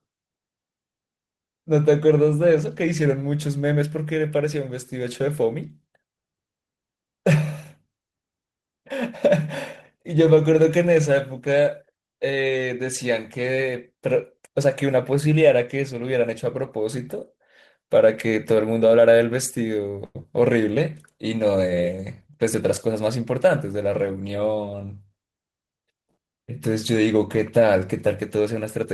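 At 20.05 s there's a short stall from a late packet: the jitter buffer ran dry, so the receiver held the last sound for about 95 ms, nothing lost, just a stretched hold with a slight buzz or dip. Right after, at 20.23 s, comes a short concealed packet loss, where about 50 ms never arrived and the gap was patched over, leaving a quick smear or wobble. Then from 22.21 to 22.96 s there's a jitter buffer speed-up: the receiver trimmed pitch periods to shed roughly 70 ms of backlog, so the speech runs about 7% faster at the same pitch and feels a bit hurried.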